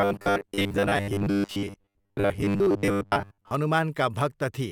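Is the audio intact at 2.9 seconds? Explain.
No. At 2.9 seconds the speech is caught in a rigid, metallic buzz pitched at 100 Hz that loosely tracks the words. This robotic sound from repeated short buffers runs from 0.01 to 3.51 s. It is likely caused by audio arriving too seldom, so the playback keeps looping the last slice, about 10 ms long given the 100 Hz pitch. That loop fills most of the time and skips the real audio.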